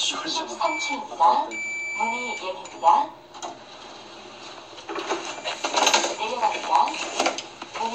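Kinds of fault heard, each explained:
No technical fault can be heard anywhere in the audio.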